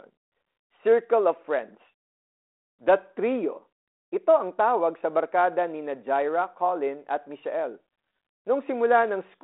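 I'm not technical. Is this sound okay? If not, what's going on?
Yes, the speech comes through intact over a G.726 telephone-style link that keeps only the range from about 250 Hz to 3.6 kHz, with nothing above about 3.8 kHz, so it sounds like an ordinary phone call with only light traces of the coding.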